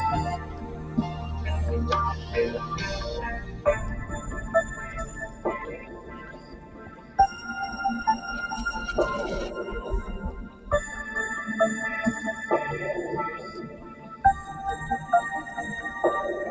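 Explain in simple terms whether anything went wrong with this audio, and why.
Held sounds and lingering tails keep sinking and swelling, so the audio pumps and thins out instead of staying steady, while sharp hits still come through clearly. This is a noise suppressor applied to music or sounds. A filter built to clean up speech on calls was left running, and it treats anything steady or fading, such as sustained tones, room ambience and reverb, as unwanted noise and turns it down.

In six places the sound is cut by the noise suppressor: 0.31 to 1.32 s, 2.13 to 2.86 s, 3.42 to 3.65 s, 4.02 to 7.18 s (the longest), 10.45 to 10.68 s, and 13.48 to 14.19 s. In each stretch the level drops noticeably below its surroundings, because the filter decided that this part was background rather than the sound itself.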